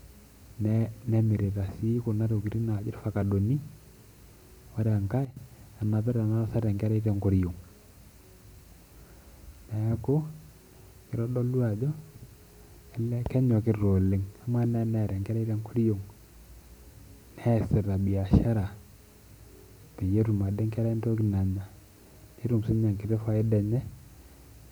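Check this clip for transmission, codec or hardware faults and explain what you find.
One fault stands out, a sudden gain jump. From 5.25 s to 5.37 s, the level drops by about 10 dB in a single step. The speech and the background noise fall together, with no fade. The likely cause is a digital gain change applied instantly, without a ramp.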